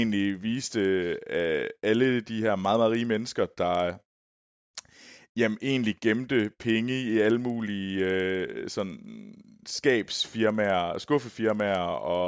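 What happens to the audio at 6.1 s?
At 6.1 s you're hearing the resampler restarted on every block, which runs the whole clip: each 50 ms block converts alone, so edges glitch, giving a 20 Hz tick-buzz under the speech.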